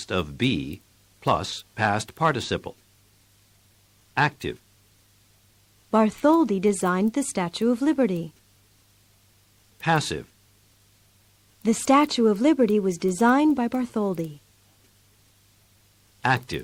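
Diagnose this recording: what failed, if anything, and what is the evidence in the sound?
Nothing in the signal points to a failure at any stage, from capture through to playback, and the recording holds together without any audible technical fault.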